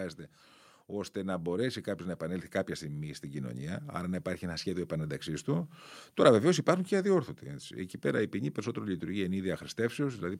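A speech recording whose level swells steadily from 0.88 to 5.54 s, voice and background rising together by about 8 dB: automatic gain rising, as the gain control lifts a quiet input.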